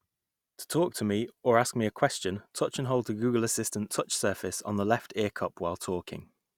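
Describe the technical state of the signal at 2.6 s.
At 2.6 s the speech signal is intact, with no audible dropout, distortion, noise or other technical fault.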